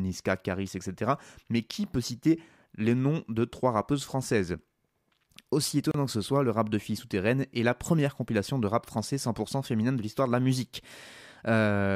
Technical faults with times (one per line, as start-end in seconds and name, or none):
5.91-5.94 gap at a join of encoded pieces